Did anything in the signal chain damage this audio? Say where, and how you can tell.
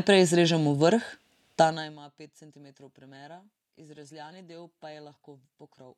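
Yes. Zipper noise at the gain stage in the driver or buffer: from 1.58 to 2.0 s the level falls about 25 dB in 2 dB steps, each a click, showing as a staircase envelope and faint vertical lines on a spectrogram.

An adaptive stream dropped to a lower bitrate on the network side: from 2.54 s to the end the speech turns suddenly rougher with codec artefacts, fitting a switch from AAC-LC 96 kbit/s to low-rate HE-AAC at 24 kbit/s, with no gap at the change.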